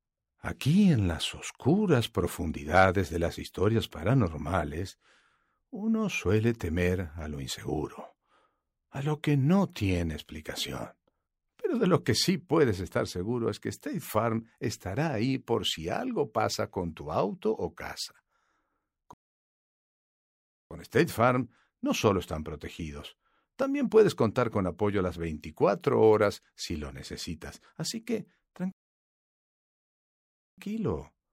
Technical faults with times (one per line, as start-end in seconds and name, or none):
19.14-20.71 rebuffering stall
28.72-30.58 rebuffering stall